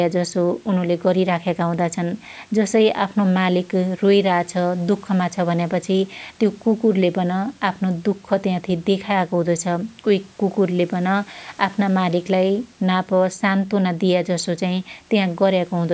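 No technical faults are audible.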